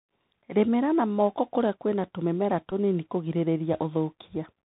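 Throughout, the Bluetooth CVSD headset codec, coding each sample as one up-or-down bit at 64 kbps, cuts everything above 4 kHz and leaves scratchy sibilants over a granular hiss. From 2.70 to 2.73 s, a Bluetooth headset packet repeated: about 11 ms of lost audio, which fits three lost packets, was refilled with old data, giving a brief buzz near 267 Hz.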